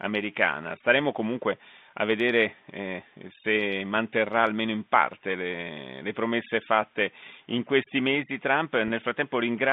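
At 8.88 to 8.90 s, late in the speech, there is a packet loss with pitch repetition. About 20 ms of audio goes missing, which fits a single lost packet. The receiver covers the gap by repeating the last pitch period instead of leaving silence. Because the loss is so short, it sounds like a slightly held, buzzy instant before the speech resumes. The telephone band of the G.711 line, roughly 150 Hz to 3.7 kHz, carries through the repair.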